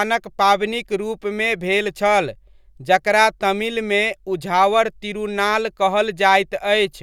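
No technical faults turn up anywhere in this speech recording, so there's nothing to flag here.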